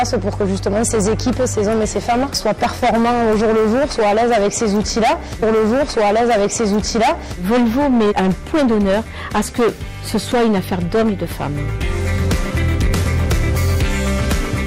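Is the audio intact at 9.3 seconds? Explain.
No. At 9.3 seconds, as across the whole clip, the audio suffers hard clipping. The signal is driven about 16 dB beyond what the stage can pass, so its peaks are sliced flat, with something like a sixth of samples pinned at the limit. Those square tops throw harmonics high up the spectrum, heard as a harsh fuzz on every loud moment. Unlike the rounded, warmer thickening of soft saturation, the distortion here is abrupt and gritty.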